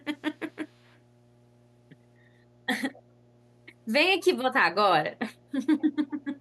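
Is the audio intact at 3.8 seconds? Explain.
No, mains hum runs under the speech at 3.8 seconds, as it does throughout the clip. Power-line interference, likely from a ground loop or nearby transformer, adds a steady 60 Hz tone with low harmonics, sitting roughly 35 dB below the speech.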